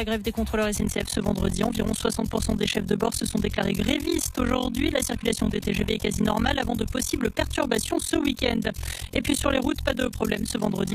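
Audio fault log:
0.77–10.94 s, overlap-add ripple: the level dips by about 60 dB roughly 40 times a second, giving a harsh, robotic flutter, because windowed frames were rejoined with overlaps whose gains fail to sum evenly. Unlike compressor pumping, the rate stays locked regardless of dynamics.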